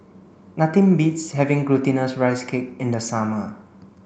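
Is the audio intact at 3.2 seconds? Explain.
Yes, at 3.2 seconds the speech plays through cleanly with no dropout, click or other technical fault.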